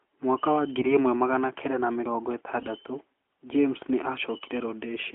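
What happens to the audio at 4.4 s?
From about 4.42 to 4.50 s the speech is hit by AMR bit errors. The 80 ms burst fits roughly three damaged 20 ms frames, with around 7 percent of the less protected bits flipped. The decoder still accepts those frames and rebuilds them from wrong pulse positions and wrong fine pitch, gain and spectral values, so pitch and level hold but the voice turns hoarse and gargly. On a spectrogram the harmonics smear into noisy, broken texture within the band of the AMR narrowband codec, while the waveform keeps its envelope but loses its regular periodic shape.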